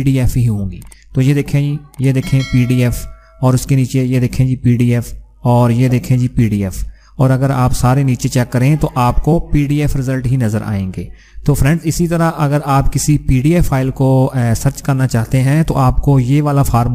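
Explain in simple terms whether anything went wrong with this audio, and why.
Compressed frames skipped: at 9.32 s the player lost a chunk of the compressed file, about one frame of roughly 26 ms, either missing or rejected as damaged. The sound jumps ahead by around 30 ms.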